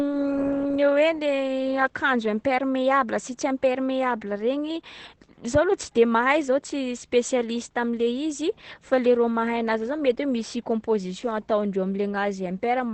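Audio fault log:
Throughout: Opus voice compression. The speech is band-limited, with nothing above about 8.5 kHz, which fits Opus running in wideband SILK mode at a low rate, around 12 kbps. SILK models each stretch of speech as a vocal-tract filter driven by an excitation signal, and at this rate that excitation is coded coarsely. The result is plainly audible: a muffled top end, with a hoarse, slightly robotic grain running through the speech.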